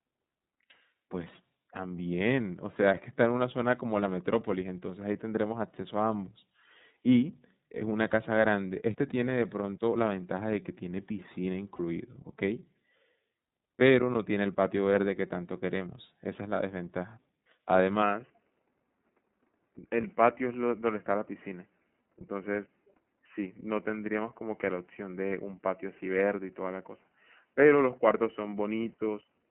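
The whole clip of speech carries the sound of the iLBC codec. Nothing above 4 kHz comes through. The voice is intelligible but slightly rough and synthetic. This is plainly audible from start to finish. iLBC codes each frame's excitation on its own, with no help from the previous frame. The grain of the sound fits the 13.33 kbps mode, which works in 30 ms frames.

At 11.76 s there is a brief lost iLBC frame, about 30 ms long. The decoder fills the hole by repeating the last pitch cycle with some noise mixed in. It sounds like a short, slightly buzzy held vowel. Because each frame stands alone, clean sound returns right after it. The same thing happens from 17.44 to 17.46 s, again about 30 ms.

From 18.02 s to the end, the sound changes abruptly. Nothing above 3 kHz remains, so the voice turns duller and boxier. There is no gap at the change. The loudness stays about the same. A faint new noise floor appears, well below the speech. 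This is likely an input switched to a poorer device mid-recording, such as another microphone or a headset in call mode.

Two more lost iLBC frames fall inside this narrower section. One is at 20.01 s and one at 28.50 s. Each lasts about 30 ms and has the same brief buzzy fill, followed by an immediate recovery.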